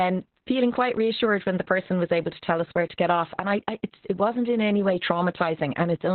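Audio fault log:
throughout: Opus voice compression. The speech is squeezed into narrowband, with nothing above 4.2 kHz, so it comes across muffled, hoarse and a bit robotic. The SILK coder is describing the excitation very coarsely, which fits a bitrate down around 8 kbps.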